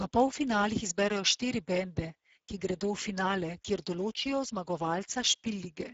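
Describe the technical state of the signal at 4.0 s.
Speex codec damage at 4.0 s, as throughout the clip: low-rate CELP coding, around 10 kbps, starves the excitation, leaving speech hoarse and noisy with nothing above 7.7 kHz.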